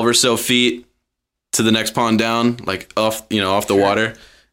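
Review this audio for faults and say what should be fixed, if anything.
A single sharp click at 3.51 s, just after "like off you know", is most likely dropped samples. Well under a millisecond of the stream goes missing, so the waveform jumps straight to a later value. Unlike a dropout, no audible stretch of sound disappears; all that remains is one thin, instantaneous click. Keeping the capture and processing buffers from underrunning or skipping reads would prevent it.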